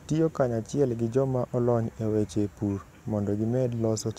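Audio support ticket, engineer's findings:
CD scratch ticks, 1.65–2.39 s: five short ticks, each a couple of ms at most, once per disc turn. Scratch beating error correction; player interpolating or muting.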